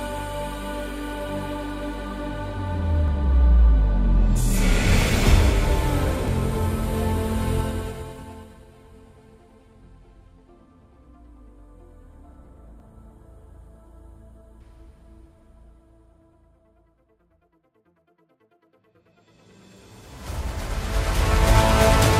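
There are four abrupt skips in this audio, at 3.08, 4.92, 6.28 and 12.8 s, each with the sound jumping straight ahead and no gap of silence. That pattern likely points to a dropped buffer (overrun), where incoming samples got overwritten before the software read them. Roughly 70 ms goes missing at the first and third, and about a tenth of a second at the other two.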